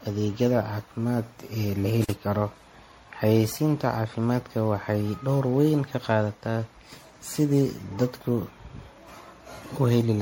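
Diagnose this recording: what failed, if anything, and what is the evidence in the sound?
Generation loss runs through the whole clip, at the codec stage. The speech sounds swirly, smeared and hollow, consonant attacks are blurred, and nothing is present above 16.6 kHz. The likely cause is repeated lossy coding: the audio decoded and re-encoded as MP3 around ten times, in a way that fits a 64 kbit/s setting. Each pass quantises again on a shifted frame grid, so the noise and spectral holes from every generation pile up.

Intermittent contact appears from 2.02 to 2.12 s, in the analogue wiring. The sound crackles, then drops out for about 42 ms, leaving only faint hiss before a second crackle as it returns. A loose plug or cable conductor briefly lost connection, breaking the signal path. The noisy edges come from the contact making and breaking, and the residual hiss is what remains while the line is open.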